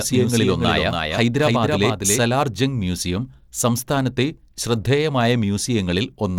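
Until 2.2 s, before "ജംഗ് മ്യൂസിയം സംസ്ഥാനത്തെ", a dry, slightly quieter copy trails about 300 ms behind, then stops abruptly: a doubled audio track, likely from a lagging second capture.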